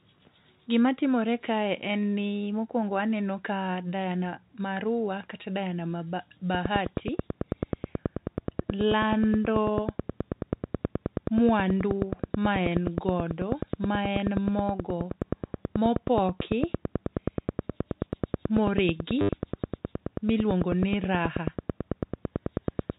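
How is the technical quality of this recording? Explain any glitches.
The recording has two faults, over telephone-band speech that stops at 4 kHz.

From 6.55 s to 22.91 s there is a train of clicks: about 150 of them, evenly spaced at 9.3 per second, peaking well above the speech level. The likely cause is interference or a failing interface injecting a pulse. On a waveform they appear as sharp regular spikes, and on a spectrogram as thin vertical lines, audible as ticking even in the pauses.

From 19.19 s to 19.29 s there is packet loss with the last packet repeated. About 90 ms of audio went missing within 100 ms, with the longest gap 70 ms, which fits 10 ms packets. The receiver replayed stale audio, so the repeats buzz near 100 Hz. It is heard as a brief robotic stutter and looks like a repeating block in the waveform.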